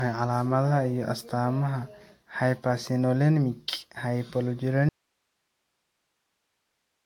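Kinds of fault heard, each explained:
generation loss: The speech sounds swirly, smeared and hollow, with blurred attacks and nothing above 19.3 kHz. This likely comes from about four rounds of AAC-LC re-encoding, each quantising on a shifted frame grid so the damage adds up. The bandwidth fits 96 kbit/s.
audio dropout to a faint residue: At 4.89 s the speech cuts off abruptly and never returns. The rest of the clip holds only hiss about 50 dB below the signal. The likely cause is the signal being lost upstream while the path after the break stayed live.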